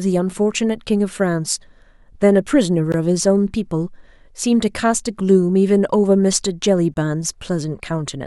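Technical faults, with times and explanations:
2.92 s and 6.94–6.96 s, gap at a join of encoded pieces: the speech was encoded as separate pieces about 4 s apart and then joined without trimming, so the encoder's start-up delay and the padding of each piece's last frame both stayed in. At each join a short silence opens in continuous speech, about 18 ms and then 23 ms long. Its edges are smeared by the codec, and the speech then resumes from where it stopped.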